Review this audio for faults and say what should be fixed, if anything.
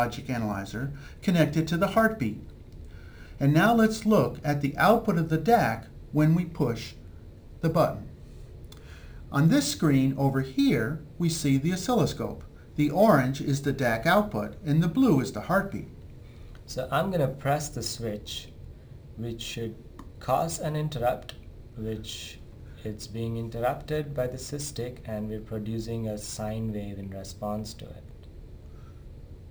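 Crude rate conversion runs throughout: samples were repeated by nearest-neighbour picking, which fits a 32 kHz to 44.1 kHz change, leaving a gritty inharmonic fizz roughly 25 dB down that tracks loud, bright passages. A spectrogram shows faint mirrored, inharmonic lines; the waveform shows tiny stair-steps. Resample with a proper band-limited filter instead of duplicating samples.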